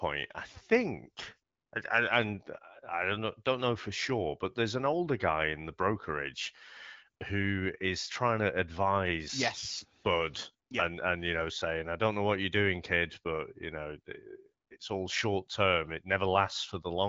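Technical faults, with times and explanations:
The speech has passed through an AMR wideband (HD Voice) link at 12.65 kbit/s, a rate at which the codec keeps speech clear, leaving only light coding damage and no content above 7.7 kHz.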